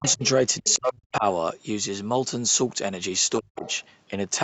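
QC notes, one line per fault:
0.00–0.22 s, 0.62–1.24 s, 3.39–3.66 s: speech suppressed in double talk. Level dips sharply, by up to about 30–40 dB, likely from an echo canceller ducking during overlap. The waveform shows notched gaps and the spectrogram shows faded columns.
0.03–0.15 s, 0.65–0.78 s, 3.58–3.76 s: other side's voice leaking through. A faint second voice, around 15–20 dB below the talker, is likely leftover loudspeaker echo. It appears as weak harmonic traces on the spectrogram.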